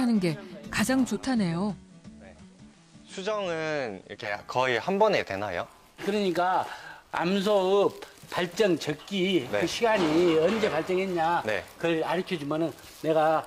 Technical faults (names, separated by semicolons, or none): digital radio blending to analogue